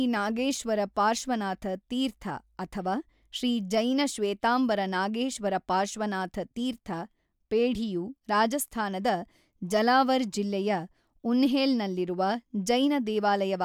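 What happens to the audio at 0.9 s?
Nothing goes wrong at 0.9 s; the speech carries on intact through that moment, with no dropout, click, distortion or other fault.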